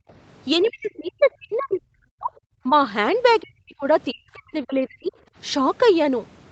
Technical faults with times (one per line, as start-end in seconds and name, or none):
0.00-0.08 background gated by the echo canceller
0.08-0.13 other side's voice leaking through
0.63-2.32 speech suppressed in double talk
0.67-0.72 other side's voice leaking through
2.63-2.73 speech suppressed in double talk
3.41-3.86 speech suppressed in double talk
4.12-5.16 speech suppressed in double talk